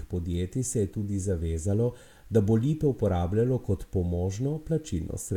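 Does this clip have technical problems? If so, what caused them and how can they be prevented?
Yes. A steady series of sharp ticks runs through the speech from 0.34 s to 4.92 s, about seven in all, roughly one every 0.7 s. These are word clock ticks. The receiving device was running on its own clock rather than locking to the sender's, and the two drifted apart by a few tens of parts per million. Each time they slipped by a full sample, one sample was dropped or repeated, leaving a tiny discontinuity. To prevent it, lock the receiver to the incoming digital signal or to a shared master word clock.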